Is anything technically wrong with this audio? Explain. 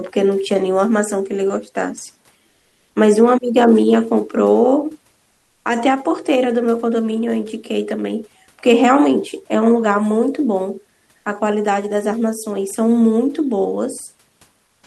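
Yes. In four speech pauses the room noise, about 42 dB below the speech, is replaced by comfort noise in place of the background, at 2.49–2.95 s, 5.31–5.65 s, 11.17–11.25 s and 14.65–14.83 s. The likely cause is Opus discontinuous transmission: the sender goes quiet when no speech is detected, and the receiver substitutes synthetic noise shaped roughly like the room. The real background's texture gives way to a flat, featureless hiss, about 2 to 3 dB quieter in three of the gaps and level in the one at 11.17 s.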